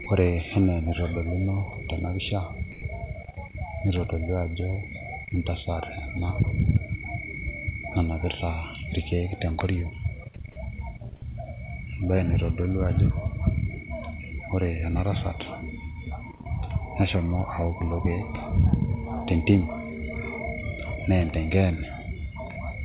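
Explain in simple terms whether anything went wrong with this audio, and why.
Sound dropped by the voice detector, at 0.04 s and from 2.72 to 2.82 s just after "enitodoluno tena pisha": speech briefly turns into soft steady noise, likely because the sender's detector mistook it for background and paused sending.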